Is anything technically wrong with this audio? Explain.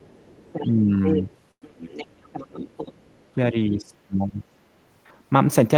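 Yes. The clip has three kinds of fault.

From 0.0 to 0.67 s and again from 1.04 to 3.21 s, the other side's voice is leaking through. A second voice sits about 15 dB below the speech. The likely cause is that the loudspeaker echo was not fully cancelled.

The speech is suppressed in double talk from 0.67 to 0.75 s and from 3.35 to 4.39 s. The first dip is brief, about 5 dB. The later one drops by up to about 15 dB. The echo canceller likely turned down this side's speech along with the loudspeaker echo.

A call audio freeze runs from 1.51 to 1.64 s. About 0.1 s of filler appears, mostly silence, and then the speech resumes where it stopped. Nothing is lost, but the audio is pushed later. Packets were likely delayed and the jitter buffer ran empty.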